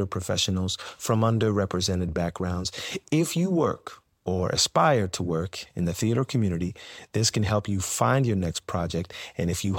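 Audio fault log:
No technical faults are detectable anywhere in this speech recording.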